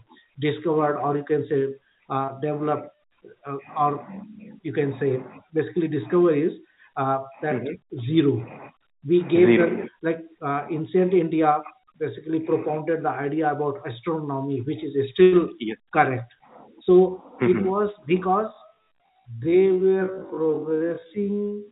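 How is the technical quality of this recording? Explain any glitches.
The recording has two clear glitches. It also carries a band limit: nothing is heard above 4 kHz, which fits a narrowband G.711 A-law call path at 64 kbps.

From 16.29 to 16.8 s, the sound is cut by the noise suppressor. The suppressor mistook this sound for noise and pulled it down, by about 12 dB at its deepest, across roughly 0.4 s. The level sags audibly, then recovers.

From 18.46 s to the end, there is a time-stretched section. The pace abruptly slows to about 0.53 times normal speed while the pitch stays put. This is likely software stretching the audio by repeating short pieces. The result drags.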